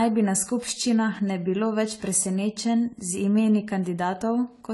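From start to finish the speech sounds dull and smeared, with nothing above 11.5 kHz and a plainly audible coded texture. The likely cause is AAC compression: an AAC-LC encoder short of bits, which fits around 32 kbps, cut the top band and quantised the rest coarsely.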